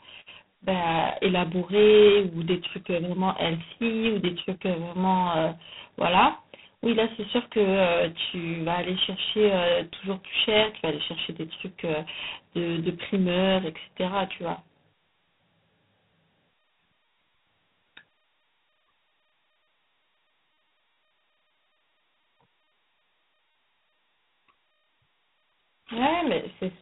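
Throughout the speech, G.726 ADPCM coding at what sounds like its 16 kbit/s mode leaves a harsh, rasping hiss that follows the speech level, and nothing above 3.9 kHz survives.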